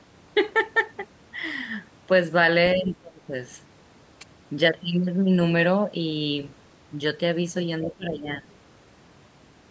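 From 2.75 to 3.33 s, and again from 7.85 to 8.45 s, the speech dips sharply, most likely speech suppressed in double talk: with both ends talking at once, the echo canceller cannot tell this talker from the returning loudspeaker echo and turns everything down. The first dip goes roughly 20 dB deep across about half a second, and the second roughly 15 dB across a little less.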